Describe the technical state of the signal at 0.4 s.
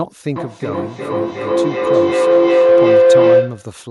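A pulsing howl near 500 Hz, up to about 14 dB above the speech, runs 0.35–3.83 s: feedback howl from a microphone–loudspeaker loop gaining level.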